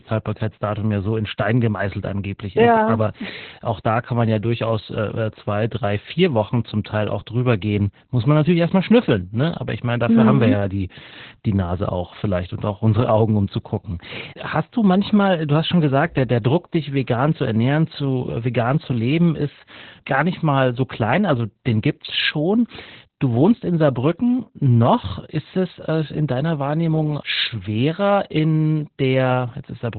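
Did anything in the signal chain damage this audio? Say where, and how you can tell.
Yes. The damage happened at the codec stage. Opus voice compression ran throughout, in SILK-only narrowband mode, with nothing present above about 4.3 kHz. The heavy, hoarse, slightly robotic quality fits a bitrate near 8 kbps. At that rate the linear-prediction coder discards the upper band and quantises the excitation coarsely. The speech therefore sounds muffled and buzzy, and it was coded in 20 ms frames.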